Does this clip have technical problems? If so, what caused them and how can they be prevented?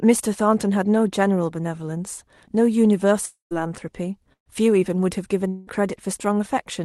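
Yes, the speech has three gaps, two of them most likely long network dropouts. At 3.25 to 3.53 s about 260 ms of audio never arrives; the receiver stretches the last sound into a fading buzz or hiss, and the final 140 ms or so is plain silence before the speech resumes further on. At 5.48 to 5.69 s about 200 ms goes missing the same way, this time fully filled with the smeared, decaying continuation. More jitter-buffer headroom or redundancy like FEC on a steadier link would help.

At 4.33 to 4.48 s there's a burst of packet loss. About 140 ms drops out, and the receiver holds the last sound as a buzz or hiss that fades, turning to near silence for roughly 110 ms of it. The speech then picks up past the missing stretch, so a bit of it is simply gone. Enabling in-band FEC or packet redundancy in the Opus sender would cover short bursts like this.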